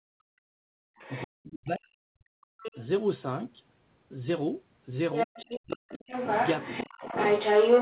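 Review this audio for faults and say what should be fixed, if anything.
Background gated by the echo canceller, 0 to 0.96 s: the room sound is pulled down by about 38 dB for most of the first second and comes back at 0.96 s. While the far-end signal was playing through the loudspeaker, the echo canceller's suppressor clamped the microphone path hard. The noise floor drops out instead of holding steady. Prevention: tune the suppressor toward gentler attenuation and add comfort noise so the background stays continuous while it acts.

Other side's voice leaking through, at 0.96 to 1.27 s, 2.58 to 2.8 s, 5.13 to 5.74 s and 5.92 s to the end: a second voice is audible under and over the talker. It sits about 15 dB below the talker in the first stretch, about 10 dB below in the second, at roughly equal level in the third and about 5 dB above by the final stretch. This is likely residual loudspeaker echo that the canceller failed to model. 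Prevention: let the echo path estimate converge fully and reduce speaker-to-microphone coupling.

Speech suppressed in double talk, at 1.25 to 2.43 s, 5.25 to 5.31 s and 5.57 to 6.02 s: the talker's level collapses by around 40 dB in pieces, for about a second in the first span and in shorter bites later. Each drop overlaps a stretch where the other voice is present. The likely cause is the canceller mistaking simultaneous near-end speech for echo and attenuating everything. Prevention: use a double-talk detector that freezes adaptation and limits suppression when both sides speak.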